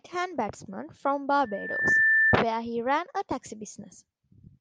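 Loudspeaker feedback squeal runs from 1.43 to 2.43 s, after "batsman from" and before "he ran a taxi". A 1.8 kHz tone swells over about half a second. It sits roughly 10 dB above the speech. The microphone hears its own loudspeaker, and the loop keeps amplifying that frequency.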